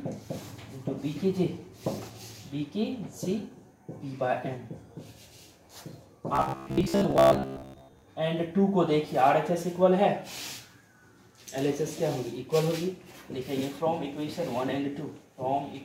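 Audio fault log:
6.36–8.02 s, robotic sound from repeated short buffers. The sound turns into a stiff, metallic buzz that loosely keeps the shape of what came before. The buzz sits at about 66.7 Hz. That fits a tiny slice, about 15 ms long, being replayed over and over. Most of this stretch is made of those repeats, with the real audio in between skipped. The likely cause is new audio arriving too seldom, so the last slice fills the gap.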